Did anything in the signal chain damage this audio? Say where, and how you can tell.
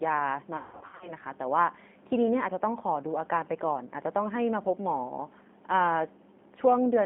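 Yes. G.729 coding, throughout: a codec-stage fault. The band is confined to 200 Hz to 3.5 kHz, and the 8 kbit/s pulse-based resynthesis leaves the speech plainly rough and synthetic.

VoIP packet loss concealed by the speech codec, 0.57 to 1.12 s: a network fault. About 360 ms of gaps over 440 ms, the longest 160 ms, are filled with extrapolated, fading buzzy or noise-like sound.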